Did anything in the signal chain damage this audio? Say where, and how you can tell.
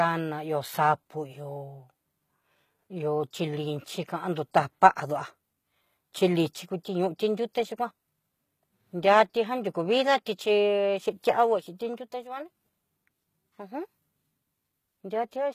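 Yes, at the codec stage, throughout the speech: the treble above the crossover sounds synthetic and gritty, with lispy, metallic s sounds, and nothing exists above 14.9 kHz. That fits HE-AAC compression at a low bitrate, around 20 kbps, likely rebuilding the top band by copying lower harmonics upward. A spectrogram shows repeated, misaligned upper bands and a hard ceiling.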